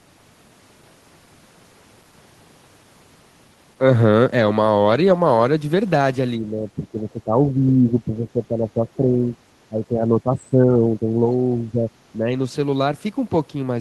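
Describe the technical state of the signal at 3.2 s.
At 3.2 s the speech signal is intact, with no fault present at that moment.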